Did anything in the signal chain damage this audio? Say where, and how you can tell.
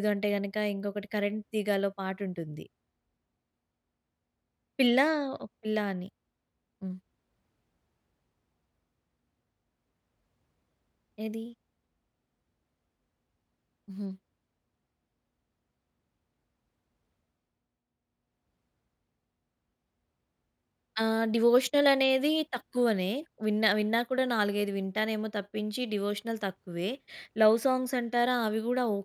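No, nothing in the chain damaged it.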